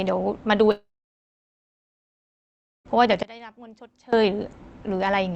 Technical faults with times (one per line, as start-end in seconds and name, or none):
0.71-2.91 long network dropout
3.23-4.13 one channel inverted